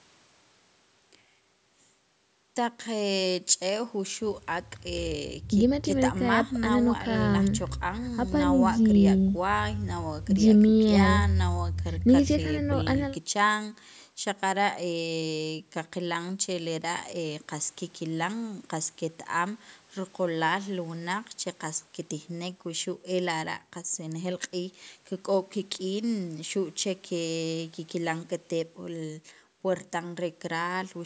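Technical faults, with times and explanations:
No technical faults are audible.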